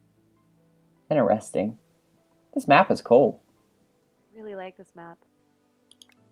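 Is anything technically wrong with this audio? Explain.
Yes. From 1.71 s to the end, the sound turns rougher and duller, with highs gone above about 12 kHz, and it stays at its coarsest for about 2.4 s. This is a call bitrate drop: the encoder was starved of bits, consistent with a fall from about 64 to 21 kbps.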